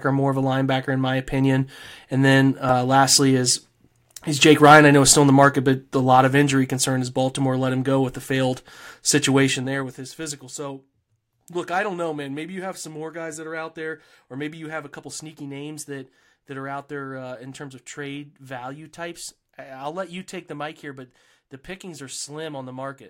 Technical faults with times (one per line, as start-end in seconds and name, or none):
9.46-10.10 zipper noise